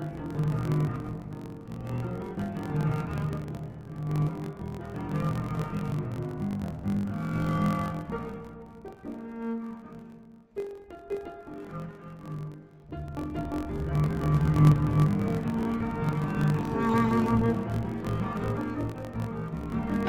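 From start to finish, interleaved audio read as planar: each 21.77 ms block's alternating left-right samples are split into halves and stretched, dropping the sound an octave and adding a 45.9 Hz buzz. A spectrogram shows harmonics halved plus vertical striping at that block rate.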